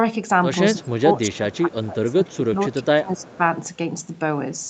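From 0.74 to 3.4 s the speech keeps dipping, about 15 dB at worst and about two seconds in total, likely speech suppressed in double talk, with the canceller ducking its own talker along with the loudspeaker echo. Within that stretch, at 1.3 s, 1.52–1.72 s and 3.19–3.37 s, you catch a faint delayed copy some 265 ms late and roughly 30 to 35 dB down, likely echo leak getting past the canceller.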